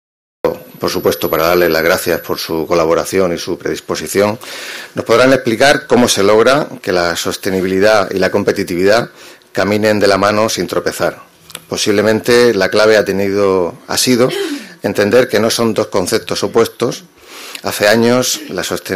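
The capture began late, so the opening of the audio was never recorded, and the clip shows a cut-off start. For the first 0.45 s there is only digital silence, and at 0.45 s the sound switches on abruptly, already partway through whatever was happening. Because the beginning of that sound is missing, there is no natural attack or fade-in. It simply appears, as if it had been sliced off at the front.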